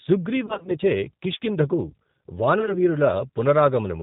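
Speech, coded with the G.729 codec at 8 kbit/s throughout. Nothing above 4 kHz survives, and the voice sounds plainly rough and synthetic. VoIP packet loss concealed by the speech codec occurs from 0.46 to 0.77 s. Gaps totalling about 130 ms are scattered over 260 ms, none longer than 30 ms. The decoder fills them with fading extrapolations of the last sound. A second, lighter burst runs from 2.59 to 2.76 s, with 30 ms missing across 80 ms.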